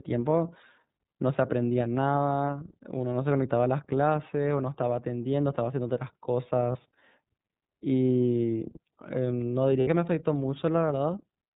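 Throughout, the speech is band-limited at 4 kHz with a rough, synthetic edge, plainly audible iLBC codec damage consistent with its 13.33 kbps, 30 ms-frame mode. At 6.71 s and again at 9.80 s, lost iLBC frames leave 30 ms and 60 ms gaps, filled by a repeated, slightly buzzy pitch cycle before the voice recovers almost immediately.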